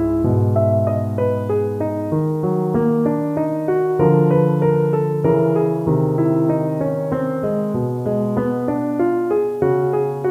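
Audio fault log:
throughout: low bit depth without dither. Grainy distortion follows the sound, gritty on quiet passages, sputtering or dropping out at the lowest levels. Likely from rounding to about 8 bits with no dither, leaving error roughly 35 dB below the signal. The waveform shows visible stair steps, and the spectrogram shows signal-dependent harmonic hash.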